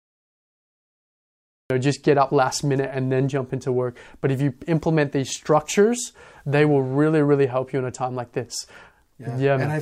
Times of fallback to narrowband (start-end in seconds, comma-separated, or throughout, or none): none